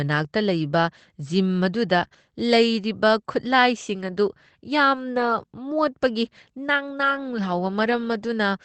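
At 1.99 s two packets of the call went missing, but the packets that followed carried low-bitrate backup copies, so the lost packet was rebuilt from error correction by Opus in-band recovery. The decoder played about 40 ms of these coarser copies in place of the originals, so there is no hole. The speech turns briefly grainier and noisier until 2.05 s. The sound is already limited to about 8 kHz by the call codec.

Right after, from 2.07 to 2.13 s, there is a short concealed packet loss. About 20 ms of audio arrived too late to use and had no backup copy, so the decoder made up roughly 32 ms by extending the previous sound and then blended back into the real signal. This is heard as a brief smear or wobble in the speech.

At 2.13 s the next packet was lost too, and the lost packet was rebuilt from error correction again, from the following packet's copy. The 20 ms rebuilt this way, lasting to 2.15 s, adds one more rough, noisy stretch just as the sound recovers.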